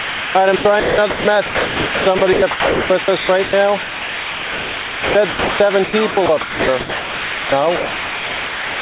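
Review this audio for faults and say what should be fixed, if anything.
The sender's voice detector likely kept switching transmission on and off, leaving sound chopped by the voice detector from 0.0 to 3.53 s and from 3.83 to 8.81 s. About 2.15 s and 3.85 s respectively were swapped for comfort noise, so the audio drops in and out. Making the detector more sensitive or turning off discontinuous transmission on the sending side would prevent this.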